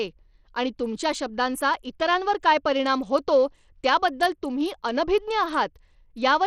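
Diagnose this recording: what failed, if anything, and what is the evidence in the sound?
The codec stage failed. Throughout the speech, the top end thins out and flickers instead of holding steady. A gritty, rough noise clings to the voice, with aliasing riding on it. The damage is plainly audible from start to finish. The likely cause is Bluetooth SBC compression at a small bit pool. Its eight coarse sub-bands starve the weak treble bands of bits and quantise the rest roughly. The grit fits a low rate near 80 kbps.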